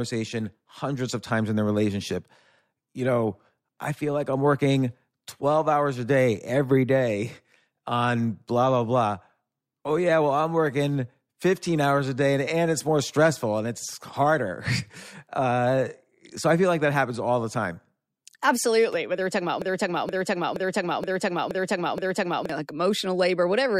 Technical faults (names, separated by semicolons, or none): broken-record loop